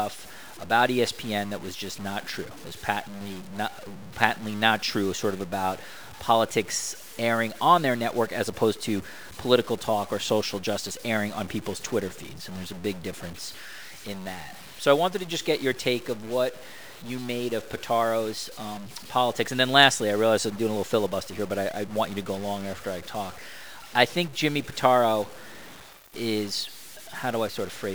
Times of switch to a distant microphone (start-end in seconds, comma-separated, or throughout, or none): none